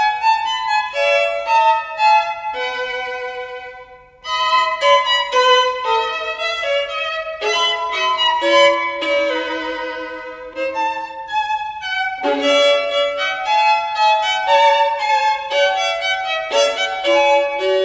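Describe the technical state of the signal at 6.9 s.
At 6.9 s the signal is intact, with no audible fault at that point.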